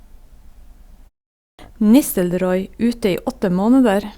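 At 1.39 s the speech resumes with a clipped start after a pause. The silence before it lasts about 0.38 s. During that gap the output device drops into a sleep state. It then needs time to wake and lock again. About 198 ms of sound is lost, up to 1.59 s. The word therefore bursts in abruptly. Its first sounds are missing. The pause itself stays quiet.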